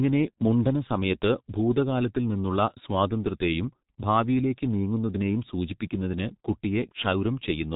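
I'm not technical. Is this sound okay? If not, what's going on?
No. The whole clip went through the G.723.1 codec, an old internet-phone format. It cuts everything above 3.8 kHz, so the speech sounds heavily muffled and hoarse, with smeared consonants.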